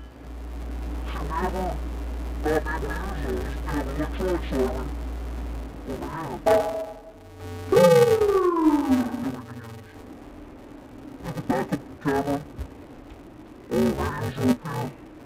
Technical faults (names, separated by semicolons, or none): interleaved audio read as planar